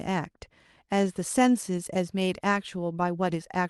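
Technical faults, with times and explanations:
No technical faults can be heard in this speech. It has passed through a WebRTC call path that is working normally, and its top end stops at about 12 kHz, which points to an Opus codec at a moderate call bitrate.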